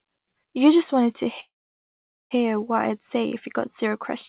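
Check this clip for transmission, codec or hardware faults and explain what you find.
There's one clear fault, a call audio freeze. From 1.4 to 2.33 s the sound briefly carries on, then drops to near-silence for about 0.8 s, likely because delayed packets drained the jitter buffer. Speech then resumes where it stopped, with nothing lost. The band-limited sound, with nothing above 4 kHz, fits a 64 kbps G.711 call path.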